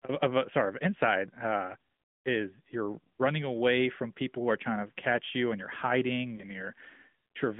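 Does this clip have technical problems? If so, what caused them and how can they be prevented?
Yes. The whole clip passed through the AMR narrowband mobile codec, which samples at 8 kHz and rebuilds speech from a vocal-tract model fed by a few pulses per sub-frame. Everything outside roughly 150 Hz to 3.5 kHz is gone, giving a thin telephone sound, and the coding damage is plainly audible as a buzzy, synthetic edge, which fits a mid-rate mode around 10.2 kbps. To prevent it, carry the call over a wideband codec such as AMR-WB or EVS.

Lost AMR speech frames appear from 6.36 to 6.44 s, just after "you and you're hiding". A speech frame failed its radio checksum, so the decoder covered the gap by repeating the previous pitch and vocal-tract settings at lower gain. The result is a brief dip or warble before the sound recovers weak or rough for a moment, which fits a single lost 20 ms frame. 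To prevent it, improve radio coverage or use stronger channel coding.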